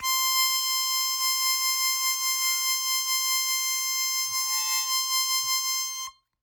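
Music, with no technical faults to be heard.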